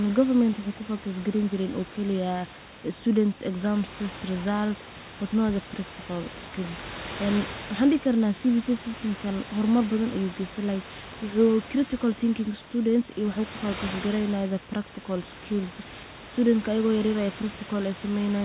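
No technical faults can be heard in the speech. Room noise sits about 13 dB below the voice, and the call path carries nothing above 4 kHz, with coding noise that fits a G.711 mu-law codec.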